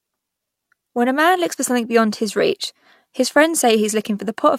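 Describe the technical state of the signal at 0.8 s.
At 0.8 s the signal is intact, with no audible fault at that point.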